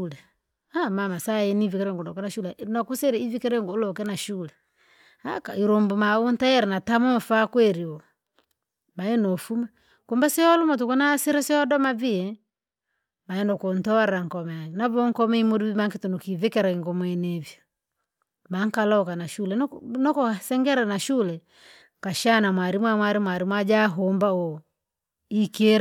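A speech recording with no technical faults to point to. Nothing in the audio calls for a timestamp or a cause.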